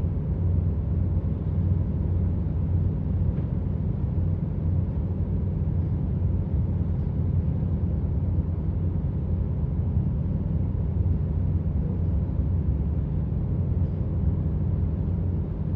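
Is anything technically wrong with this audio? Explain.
No, no technical faults heard.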